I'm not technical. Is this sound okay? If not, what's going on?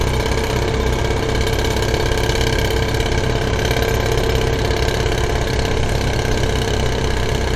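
Yes, no technical faults heard.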